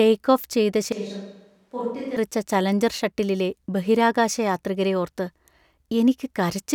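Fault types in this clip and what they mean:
Switch to a distant microphone: The close microphone's feed likely dropped out, leaving a mic further from the talker to carry the speech. From 0.92 to 2.17 s, right after "ഓഫ് ചെയ്ത" and until "ചലഞ്ചർ ഷട്ടിലിലെ ബഹിരാകാശയാത്രികരെ ഓർത്ത്", the voice abruptly turns hollow and roomy with thinner bass, falls roughly 10 dB in level, and sits on a room-noise floor some 35 dB below the speech, before snapping back to the close sound.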